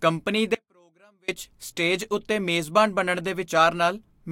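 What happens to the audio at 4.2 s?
Nothing goes wrong at 4.2 s; the speech there is intact, with no dropout, click or distortion.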